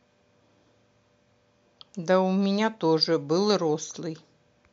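Nothing technically wrong turns up anywhere in this short bit of speech, so there's no fault to point to here.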